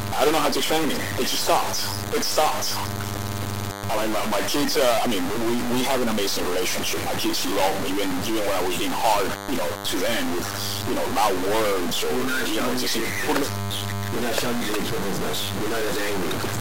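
A steady, thin 100 Hz buzz with many harmonics runs through the whole sound, sitting roughly 20 dB below the signal. This is DECT cordless phone buzz, from 10 ms radio bursts rectified in the audio circuit. Harsh, buzzy distortion is also present throughout, and quiet passages fill with noise near 20 dB below full scale. The likely cause is a stuck bit forcing about half the sample values off by a fixed step.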